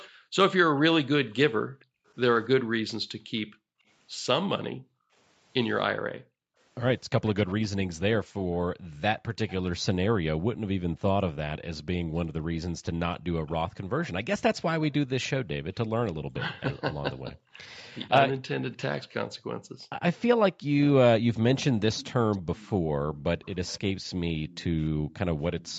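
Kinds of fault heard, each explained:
Echo leak: a faint copy of the speech trails roughly 0.3 s behind, likely the far end's echo canceller letting some loudspeaker pickup slip back.
Background gated by the echo canceller: the room sound keeps ducking, by up to about 40 dB, whenever the canceller clamps the mic while its speaker plays.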